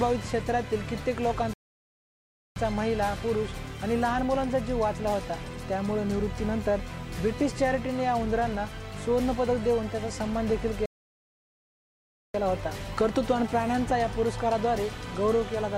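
At 1.53 s the sound cuts to silence for about 1.03 s, until 2.56 s. At 10.86 s it stops again, for about 1.49 s, until 12.34 s. Both are playback stalls. The player likely ran short of data or was blocked, so output simply paused.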